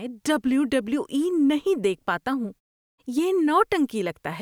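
Nothing goes wrong in this speech clip; the only thing you'll notice is the background dropping to silence in the pauses and coming back in time for the next sound, which is just how it's meant to work.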